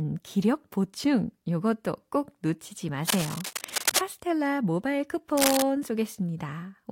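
Cable scratch noise occurs at 3.08–3.99 s and 5.37–5.62 s. Rough, uneven scratching sits near speech level. A worn cable or connector shifting is the likely cause.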